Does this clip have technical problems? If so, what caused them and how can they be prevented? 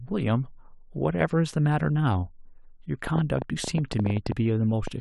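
Yes. From 3.07 to 4.88 s there's a train of clicks: roughly fifteen uneven pops, about 8.2 a second, up to about 10 dB above the speech, likely from interference from nearby equipment. Keep cables shielded and move gear away from noisy devices.

At 4.31 s, damaged data in the compressed stream makes the decoder lose sync, giving a brief blip. Verify file integrity and use reliable transfer or storage.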